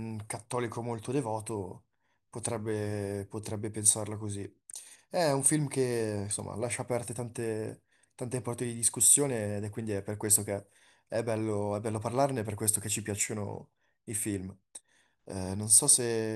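Nothing in this speech recording stands out as a technical fault, so there's nothing to point to along the way.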